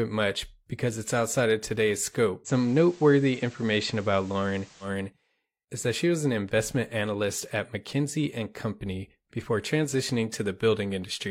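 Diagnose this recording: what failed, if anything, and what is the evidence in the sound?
At the receiver, the digital radio is blending to analogue. Just after "it's outside of today's", at 2.44 s, a 111 ms cross-fade moves the sound onto the FM simulcast until 4.91 s. The level shifts by about 2 dB, and hiss rises to roughly 30 dB below the signal as the digital stream drops out.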